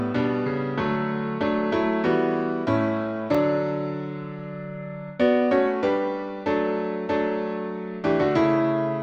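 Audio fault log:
3.34 s, block of digital silence: a 2.67 ms gap where output dropped to zero with no fade, fitting a missed 128-sample buffer, so it ticks.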